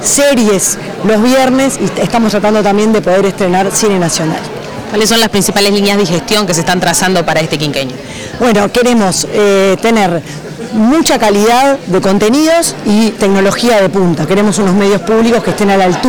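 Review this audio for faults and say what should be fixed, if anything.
Hard clipping runs through the whole clip. The signal reaches the converter or fixed-point stage about 20 dB hotter than it can pass, so nearly a third of the samples are sliced off at that stage's limit. Every loud passage turns into a harsh, constant fuzz. On the waveform the peaks are flat plateaus. A spectrogram shows dense harmonic energy smeared far up into the high kHz range wherever the level rises. To prevent it, set gain so peaks sit well below 0 dBFS before conversion, or add a limiter ahead of the stage.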